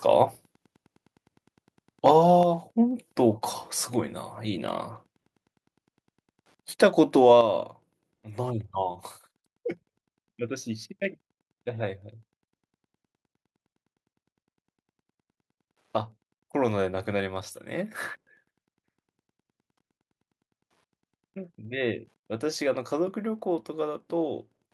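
Wi-Fi interference runs through the whole speech clip as a faint, steady ticking about ten times a second, very low, roughly 45 dB under the speech. A nearby Wi-Fi radio's beacon, sent every 102.4 ms, is being picked up and rectified by the audio circuit, so each transmission turns into a small click. On a spectrogram this shows as evenly spaced thin vertical lines across a broad frequency range. In the waveform it appears as tiny regular spikes, most visible in pauses.

At 2.43 s the level of the speech and the background drops abruptly by about 5 dB, and at 7.41 s it falls again by about 7 dB. Both are sudden steps with no fade. This is a microphone volume stepped down, likely the call software lowering the device's input volume in single jumps. In the waveform the envelope shrinks in a clean step at each time. On a spectrogram everything, including the noise floor, darkens uniformly from that point on.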